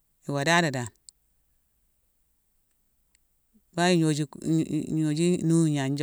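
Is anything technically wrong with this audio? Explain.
No, no technical faults are present.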